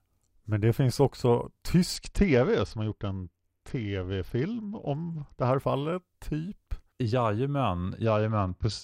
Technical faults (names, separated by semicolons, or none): Bluetooth SBC bit pool drop